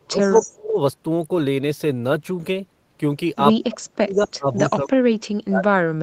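From 0 to 0.78 s the speech sinks by as much as about 35 dB, likely speech suppressed in double talk, where an echo canceller, hearing both sides at once, turned down the near talker along with the loudspeaker echo. On a waveform the envelope collapses, and a spectrogram shows the upper harmonics thinning out. Inside that stretch, from 0.22 to 0.51 s, a faint copy of the voice trails 246 ms behind, roughly 15 dB down. This is likely an echo leak, where loudspeaker sound reached the microphone and escaped cancellation. It appears as a ghost repeat of the harmonic pattern, shifted right on the spectrogram. From 3.67 s to the end the same suppression returns with similar dips. At 4.14 to 4.25 s a weaker echo, about 25 dB down and again 246 ms late, briefly shows through.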